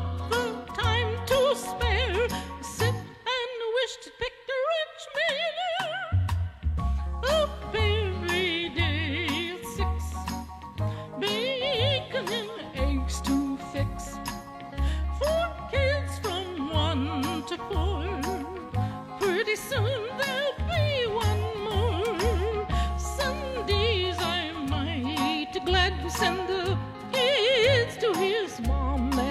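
No technical fault can be heard anywhere in the audio. There is nothing to locate in time and no cause to point to.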